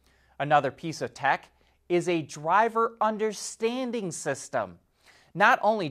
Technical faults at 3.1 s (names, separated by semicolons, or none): none